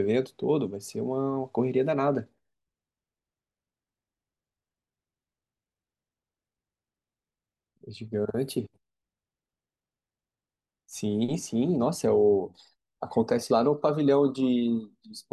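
No technical faults occur anywhere in the recording.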